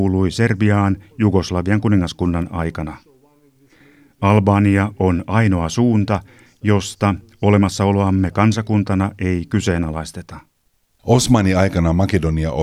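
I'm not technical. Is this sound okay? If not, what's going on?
Yes, this sound is okay. Nothing goes wrong anywhere in this speech recording, so there's nothing here you need to worry about.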